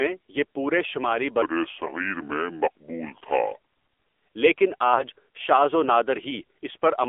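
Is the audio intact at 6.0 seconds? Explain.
No. At 6.0 seconds, as across the whole clip, the speech has passed through an AMR narrowband mobile codec, whose low bit budget fits the 7.4 kbps mode. The codec samples at 8 kHz and rebuilds the voice from a vocal-tract model driven by a few pulses per 5 ms subframe, within a phone band of 300 Hz to 3.5 kHz. The result is a thin, boxy voice with no high-frequency detail and a plainly audible buzzy, synthetic edge.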